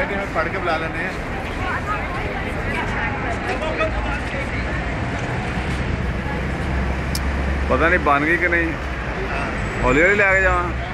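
At about 2.92 s the audio suddenly loses its top end and picks up a gritty, grainy edge, and it stays like that until roughly 6.02 s before clearing up. That's a Bluetooth SBC bit pool drop. The link got congested, so the sender cut the bit budget, and the character of the degradation fits a fall from a bit pool around 28 to about 13, near 102 kbps. The upper sub-bands get starved and everything else is quantised coarsely, which is why it sounds dull and rough for those three seconds or so.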